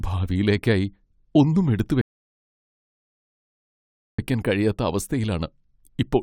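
The player exhausted its downloaded audio at 2.01 s, a rebuffering stall: speech drops to silence until 4.19 s, then resumes exactly where it stopped, adding 2.17 s.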